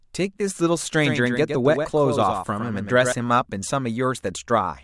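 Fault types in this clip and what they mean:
Doubled audio track: From 1.02 s to 3.12 s the speech is heard twice. A second full-band copy trails the original by about a tenth of a second, some 5 dB quieter. It has no decay and no room colour, so it is not an echo. It switches on and off abruptly at both ends. The likely cause is the signal being captured again through a slower path, or an edit leaving two copies out of step.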